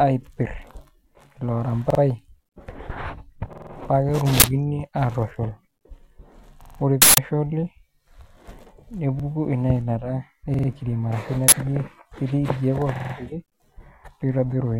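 Repeated buffers occur at 1.90, 3.53, 6.64, 9.20, 10.54 and 12.96 s. Late audio makes the device replay the last 46 ms piece one to four extra times, which fits a 2048-sample buffer. Each is heard as a stutter with hard joins, and nothing is skipped afterward.

Uninitialised buffers occur at 4.40 s (40 ms), 7.02 s (160 ms) and 11.48 s (40 ms). Leftover memory played as samples gives a loud burst of digital noise that is unrelated to the surrounding speech, unlike the repeats.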